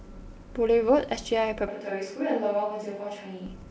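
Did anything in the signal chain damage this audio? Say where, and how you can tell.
Yes, at capture: from 1.68 to 3.46 s the speech abruptly turns hollow and roomy, about 5 dB quieter with more room noise, likely a switch to a distant microphone.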